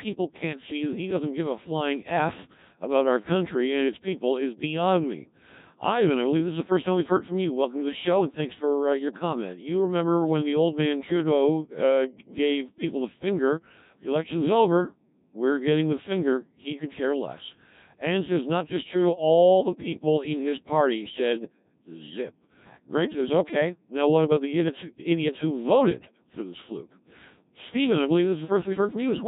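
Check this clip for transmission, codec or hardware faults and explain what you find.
One codec fault runs through the whole speech clip: Codec 2 vocoder coding, heavily damaged. The decoder rebuilds speech from sine waves using only pitch, voicing and envelope, which fits a 1.3 kbit/s mode. The result is robotic, buzzy speech. Unlike ordinary low-bitrate smearing, the original waveform is gone entirely.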